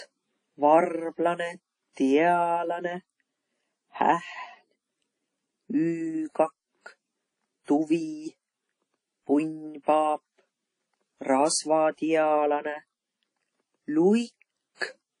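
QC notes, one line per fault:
throughout, transcoding between lossy codecs: muffled top with nothing above 10.1 kHz, two mixed layers of codec artefacts on speech; likely a low-bitrate WMA encode re-encoded as AAC.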